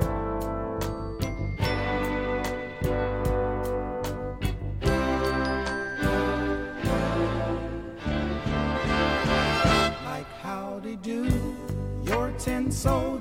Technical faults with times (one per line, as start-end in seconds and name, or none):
9.05-12.39 sample clock jitter